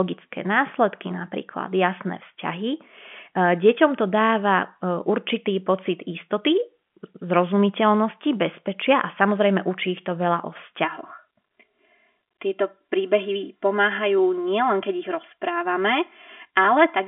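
Channel delay (comb filtering) from 10.85 s, after "ich to veľa o", to the end: one channel lags about 3 ms, notching the mono sum from around 150 Hz, so the speech sounds hollow.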